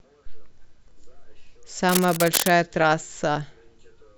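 From 1.89 to 2.50 s, cable scratch noise rasps over the speech at nearly its own level, likely from a worn cable or connector being moved so its contact resistance jumps about. On a spectrogram it shows as dense, broadband, irregular vertical streaks; the waveform looks ragged and spiky.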